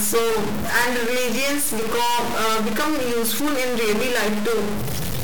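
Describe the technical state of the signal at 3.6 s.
At 3.6 s the speech carries the harsh, buzzy distortion of a stuck bit, present throughout the clip rather than at this moment alone. The likely cause is one data bit held fixed, shifting roughly half the samples by a step of around -20 dBFS in a waveform-driven pattern. Pauses fill with noise too. On a waveform this shows as an offset, jagged trace; a spectrogram shows broadband hash smeared across all frequencies, even between phrases.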